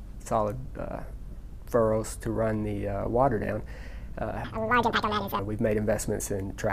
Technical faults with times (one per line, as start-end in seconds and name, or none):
4.44-5.39 section at the wrong speed